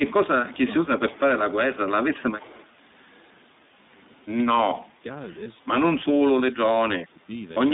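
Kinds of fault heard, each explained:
iLBC codec: Throughout, the sound is confined to a telephone band of roughly 200 Hz to 3.7 kHz, with nothing above 4 kHz. The speech has a plainly audible rough, slightly synthetic edge. The damage fits iLBC's 15.2 kbps mode with 20 ms frames. Each frame's excitation is coded on its own, with no help from the previous frame, so fine detail in the voice is traded for robustness.
Speech suppressed in double talk: From 0.00 to 0.88 s, 1.05 to 1.94 s, 4.51 to 5.05 s and 6.0 to 7.3 s, the speech dips and thins in pieces. The early dips are about 15 dB and the later ones about 25 dB. This is likely an echo canceller that could not tell the near talker from loudspeaker echo while both sides spoke, so it turned everything down.
Echo leak: At 0.51 to 0.59 s, 2.15 to 2.23 s and 2.39 to 2.65 s, a faint delayed copy of the voice trails the speech by 158 ms. It sits about 25 to 30 dB below the speech and comes in short scraps. 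The likely cause is a loudspeaker on one side of the call whose echo canceller let part of its microphone pickup through and sent it back.
Lost iLBC frames: At 5.44 to 5.48 s, there is a brief held, slightly buzzy patch where the speech should continue. It fits a single lost 20 ms frame. The decoder filled the gap by repeating the last pitch cycle mixed with noise. Because iLBC frames do not depend on earlier ones, the speech is correct again immediately afterwards.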